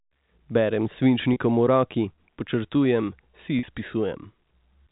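At 1.33 s and again at 3.59 s, packet loss with pitch repetition bridges gaps of 30 and 40 ms with a repeated pitch period. Each gap sounds like a brief buzzy hold, not a silent dropout or click.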